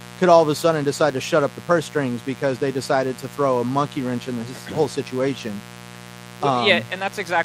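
Speech, with a mains buzz running under it from start to finish. It is a steady, raspy drone built on 60 Hz, sitting about 20 dB below the speech. Sharp switching spikes from a dimmer, rectifier or unshielded cable spread harmonics up into the kilohertz range.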